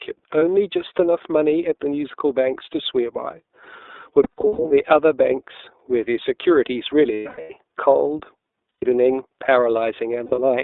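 The whole speech clip runs through the iLBC codec, squeezed into a 300 Hz to 3.7 kHz line band, sounding slightly rough and synthetic, which fits its 13.33 kbps, 30 ms frame mode. Lost iLBC frames show up at 0.39 s (one 30 ms gap), then scattered between 4.23 and 4.72 s and between 7.14 and 7.51 s (about 300 ms each, runs up to roughly 100 ms), at 8.69 to 8.83 s, and 10.26 to 10.40 s. Each gap sounds like a held, buzzy vowel from the decoder repeating the last pitch cycle, with clean recovery straight after.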